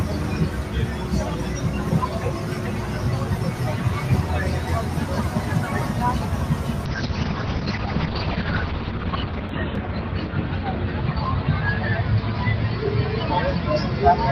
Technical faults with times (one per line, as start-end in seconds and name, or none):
6.87-14.31 call bitrate drop